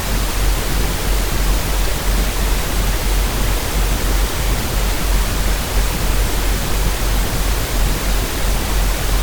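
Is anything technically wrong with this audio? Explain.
No, the signal holds steady throughout with no dropouts, distortion or other technical faults to be heard.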